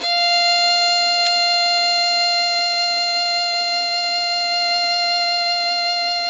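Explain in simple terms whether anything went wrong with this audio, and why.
Two problems stand out in this music. Throughout, it sounds dull and smeared, with nothing above 8 kHz and several kinds of compression grit layered together. That is likely transcoding between lossy codecs, meaning the music was squeezed by one compressor after another. One bad encode would leave only one kind of blur. At 1.27 s there is a sharp snap on top of the music, likely an electrical switching spike from a nearby switch or static. It is a crisp snap added on top of the sound, not a dropout or a skip.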